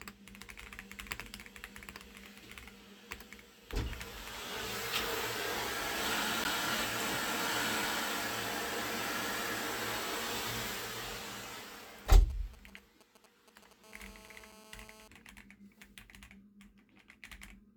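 At 6.44 s there is a CD skip: a knock or disc flaw threw the laser to a different turn of the spiral, so the player mutes for roughly 10 ms and resumes elsewhere. It is heard as a tick and an abrupt jump in the audio. The waveform shows a near-silent notch with a discontinuity on either side, and the spectrogram shows a thin vertical broadband line.

From 11.12 to 13.73 s come GSM signalling bursts. A nearby 2G phone is exchanging short groups of radio bursts with the network, and the audio circuitry rectifies them into a galloping dit-dit-dit of brief 217 Hz buzzes, roughly 20 dB below the program. The spectrogram shows clustered vertical stripes with a harmonic comb above 217 Hz.

From 13.84 to 15.08 s the phone is in a call, producing a steady GSM phone buzz. Its bursts at 217 times a second are rectified into a hard, raspy tone about 21 dB below the signal and unrelated to it. The spectrogram shows continuous horizontal lines at 217 Hz and its many harmonics, well into the kHz range, and the waveform carries a regular pulse train.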